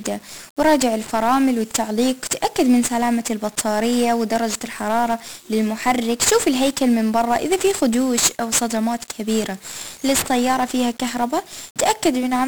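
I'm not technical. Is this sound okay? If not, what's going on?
No. The recording was squeezed with 1-bit DFPWM compression, which stores just one on-or-off step per sample to nudge the level up or down. That leaves heavy fuzz and crackle over the speech from start to finish, with the crisp high sounds buried under hiss.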